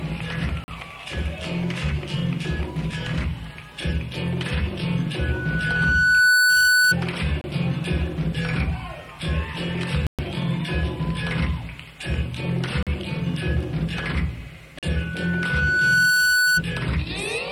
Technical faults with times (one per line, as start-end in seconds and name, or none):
0.64-0.68 block of digital silence
5.19-6.95 loudspeaker feedback squeal
7.41-7.44 block of digital silence
10.07-10.19 block of digital silence
12.83-12.87 block of digital silence
14.79-14.83 block of digital silence
14.95-16.63 loudspeaker feedback squeal